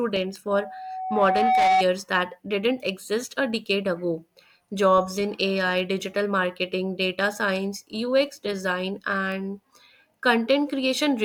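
A speech recording with two kinds of fault. Bit error spikes at 0.36 s and 9.32 s are single corrupted samples, reaching about -16 dBFS and -22 dBFS, each heard as one sharp tick. On the waveform each is a lone one-sample needle, and on the spectrogram a thin vertical line across all frequencies. A loudspeaker feedback squeal runs from 0.50 s to 1.84 s, ending just before "that didn't exist a". A 752 Hz tone swells over about a second until it sits a few decibels above the speech, because the microphone was picking up its own loudspeaker. On the spectrogram it is a bright horizontal band at 752 Hz that thickens, and on the waveform a growing sinusoidal envelope.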